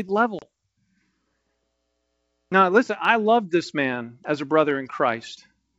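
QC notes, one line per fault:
0.39–0.47 s, packet loss on an ADPCM call: about 30 ms of the wideband G.722 speech, a few packets' worth, drops out and is replaced by silence, leaving a hole with abrupt edges. Because ADPCM codes each sample relative to a prediction, the decoder's predictor and step size drift away from the sender's during the gap. The speech that follows is briefly mistracked until the two states converge again within tens of milliseconds.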